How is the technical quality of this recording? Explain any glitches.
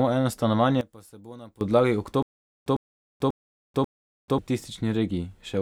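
The recording has two clear glitches.

From 0.81 to 1.61 s, the speech drops by about 21 dB. The likely cause is one channel inverted. With one stereo side's polarity reversed, the shared centre content cancels when summed to mono, leaving only a faint difference signal.

From 2.23 to 4.38 s, there is a stutter with silent gaps. A 102 ms burst of speech repeats four times, each followed by about 438 ms of dead silence, a 540 ms cycle. This likely comes from a stalled player replaying its last fragment, and the speech from that stretch is lost.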